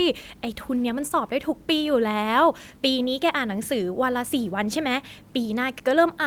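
No technical faults are audible anywhere in the recording.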